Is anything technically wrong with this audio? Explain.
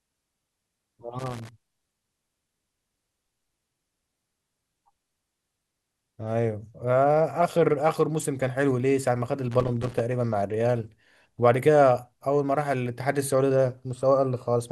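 Yes. Loose connector crackle occurs from 1.19 to 1.49 s and from 9.52 to 10.0 s. A worn contact rapidly breaks the signal, giving irregular scratchy crackling bursts.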